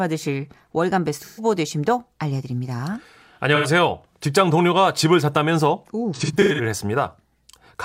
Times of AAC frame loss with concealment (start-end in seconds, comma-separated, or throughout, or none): 1.22-1.44, 3.55-3.67, 6.15-6.61